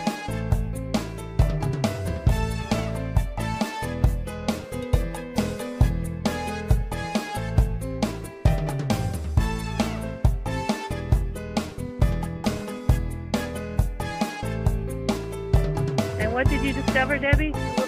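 At about 12.01 s there's a block of digital silence: the output drops to nothing for roughly 0.67 ms and then snaps straight back with no fade. That's the program not filling its output buffer in time, or a calculation turning out invalid values that got replaced by zeros. The length suggests a run of about 32 samples. At well under 15 ms, it comes across as a brief tick or dip in the sound rather than a gap you'd hear as silence.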